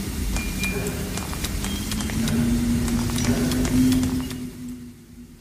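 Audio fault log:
3.90–5.02 s zipper noise: the level falls by roughly 20 dB in discrete jumps of about 2 dB, around ten per second, with no smoothing between them. Each abrupt gain jump leaves a small click, so a ticking, zipping texture rides on the sound while the level drops. A smooth fade would glide down without these clicks.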